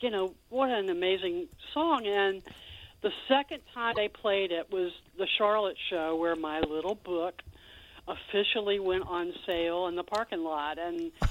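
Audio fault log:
3.91–3.98 s, broken MP3 bit reservoir: a 70 ms glitch as the sound jumps ahead, likely because frames were dropped and the next frames pulled reservoir bytes from the wrong frame.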